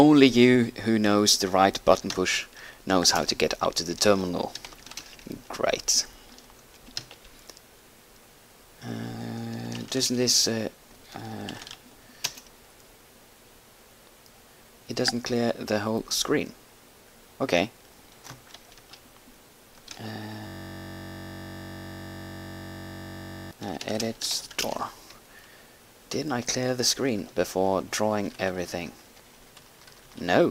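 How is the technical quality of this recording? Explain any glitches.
There's one real glitch, a system hang loop from 20.47 to 23.51 s. The machine or its audio driver stalled, but the sound hardware kept replaying whatever was sitting in its ring buffer. That buffer held only about 21.33 ms of audio, which fits a 1024-sample buffer, so it repeated well over a hundred times at 46.9 Hz. It comes across as a steady, rough buzz for about three seconds until the system recovers.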